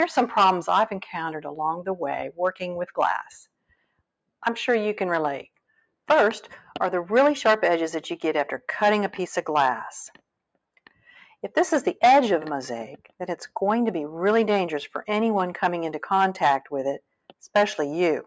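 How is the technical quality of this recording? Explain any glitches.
There are two glitches. Both are sound cut by the noise suppressor. The audio went through call microphone processing, which leaves nothing above 8 kHz.

From 3.45 to 4.01 s, and again from 10.77 to 11.09 s, the suppressor mistook part of the sound for noise. It turned that part down harder than the rest. The deepest drops are about 21 dB and about 13 dB. The sound sinks in level, or its decay is cut short.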